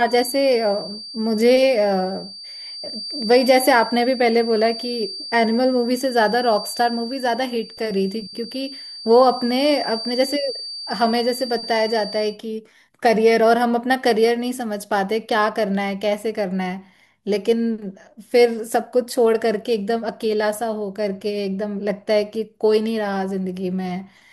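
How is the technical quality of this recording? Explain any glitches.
A feedback whistle runs under the speech from the start to about 12.4 s, then stops. It is a thin, steady tone at 4.6 kHz, sitting roughly 15 dB below the speech and slowly swelling and fading in level. The likely cause is a loudspeaker-to-microphone loop held just at the edge of feedback, so one frequency keeps ringing without building up. On a spectrogram it shows as a single bright horizontal line at 4.6 kHz that ends at 12.4 s.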